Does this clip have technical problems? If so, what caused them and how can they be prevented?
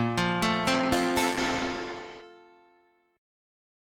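Yes. From 0.75 to 2.29 s there is a call bitrate drop: the sound turns coarser and rougher for about 1.5 s, consistent with the bandwidth estimate falling and the Opus encoder going from roughly 32 kbps to 12 kbps before recovering. Prevent it with more stable network capacity, traffic prioritisation for the call, and a sensible minimum encoder bitrate.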